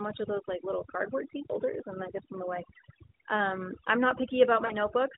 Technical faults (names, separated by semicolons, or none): overdone noise removal; lost AMR speech frames